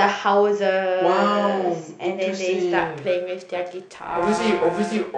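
From 2.78 s to the end at 5.18 s, periodic clock jitter adds a rough, metallic edge to the speech. A converter clock wobbling around 1 kHz places sidebands at that spacing on every component, strongest on high frequencies. Unlike hum, it disappears in pauses.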